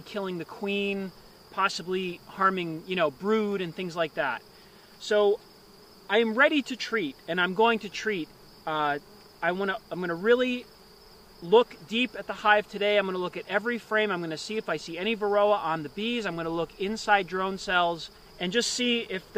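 No technical faults can be heard anywhere in this audio. There is nothing to mark at any point.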